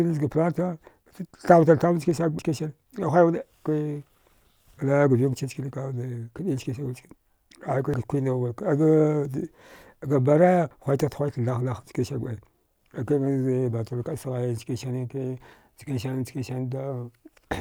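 The software likely fell behind the audio hardware, a dropped buffer (overrun), so samples were overwritten and the speech jumps ahead at 2.39 s (about 150 ms lost), 7.94 s, 10.71 s and 15.53 s (after "sghai chkan sani ke"), the last three losing about 40 ms each.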